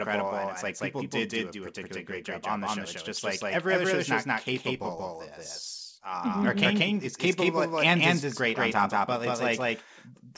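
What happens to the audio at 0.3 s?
At 0.3 s, as throughout the clip, the speech carries a doubled audio track: a second, equally loud copy trails about a fifth of a second behind, likely from the same signal being captured twice. Unlike an echo or reverb, the copy has no decay or room colour and repeats only once, with the same 8 kHz ceiling as the original.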